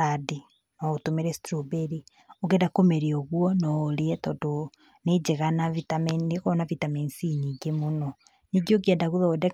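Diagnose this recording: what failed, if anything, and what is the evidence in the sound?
Nothing failed: the sound gives no evidence of any fault at any stage of the recording.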